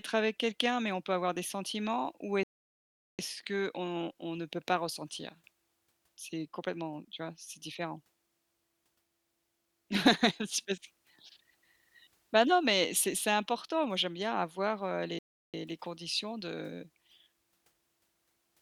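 At 2.43 s the speech stops dead. This is a rebuffering stall. The player used up its downloaded audio and paused until more arrived. Silence holds until 3.19 s, adding 0.75 s. Then it picks up exactly where it left off, on "qu'on on ne peut". A second stall hits at 15.19 s, right after "j'aime bien avoir heu". It lasts 0.35 s. Speech resumes on "les conditions de". Nothing is skipped. The clip just runs longer.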